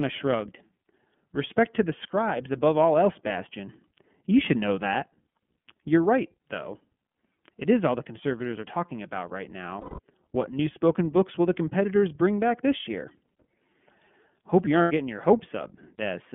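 The whole clip of speech passes through the iLBC codec. Content is confined to roughly 150 Hz to 3.4 kHz, and the clearly audible rough, synthetic texture fits the 13.33 kbps mode with 30 ms frames, each coded independently.

Lost iLBC frames occur at 9.81 s, just after "are talking about right", for 180 ms, and at 14.82 s, just before "getting your", for 90 ms. The decoder repeats the last pitch cycle mixed with noise, heard as a held, buzzy vowel. The voice returns to normal almost immediately.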